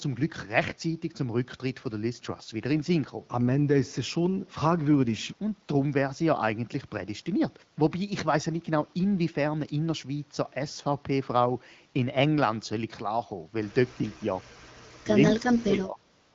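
Between 13.95 and 14.38 s the speech dips by about 10 dB for roughly a fifth of a second, and from 15.17 to 16.03 s it collapses far deeper, about 30 dB, dropping out for most of that stretch. This is likely speech suppressed in double talk: with both ends talking, the echo canceller mistook the near talker for loudspeaker echo and attenuated it.

From 16.21 s to the end, the last 0.14 s or so, the background turns into a smooth, even hiss. That is AMR comfort noise: the sender stopped transmitting speech frames and the receiver substituted synthetic noise built from a rough level and spectrum estimate.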